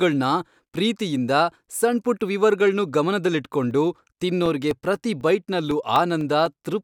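From 3.46 to 6.71 s, the speech ticks every 0.25 s with tiny silent gaps: periodic USB or driver dropouts, the audio path stalling regularly.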